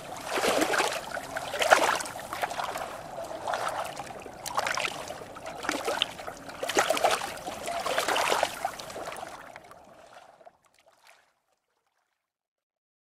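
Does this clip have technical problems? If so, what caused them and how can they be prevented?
No, there's nothing here that needs fixing or preventing, and the gentle fade-out from around 9 s to the end is just the kind of smooth, deliberate edit you'd expect.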